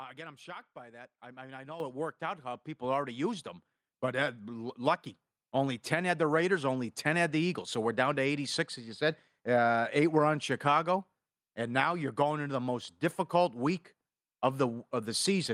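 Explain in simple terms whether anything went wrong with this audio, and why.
Three times early on, at 1.8, 2.82 and 4.86 seconds, the speech abruptly gets louder, and the background noise jumps up right along with it. The first jump is the biggest and the last is slight. This is a microphone volume stepped up fault: the call software judged the microphone too quiet and raised its input volume in single steps, so everything the microphone picks up gets louder at once.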